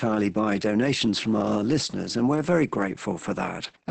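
Speech, and throughout it sounds muffled, hoarse and faintly robotic, with nothing above 8.8 kHz. This is heavy Opus voice compression in its SILK speech mode, wideband, where coarse coding of the excitation at a rate that points to roughly 10 kbps roughens the voice.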